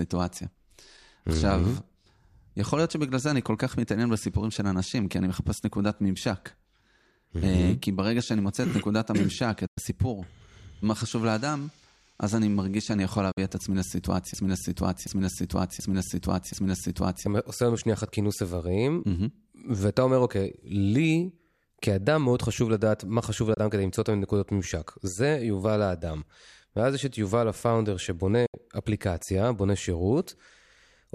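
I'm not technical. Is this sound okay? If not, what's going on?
No. There are digital broadcast dropouts, brief silences at 9.67, 13.31, 23.54 and 28.46 s, lasting 24 to 96 ms, where the receiver lost the signal and briefly muted.

From 14.34 to 17.26 s there is a broken-record loop: a 0.73 s piece repeats four times, likely because the stream stalled, so that stretch of speech is lost.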